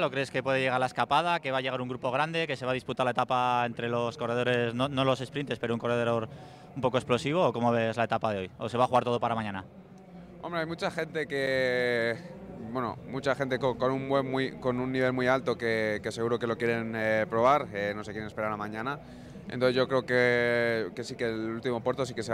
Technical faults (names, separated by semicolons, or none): block of digital silence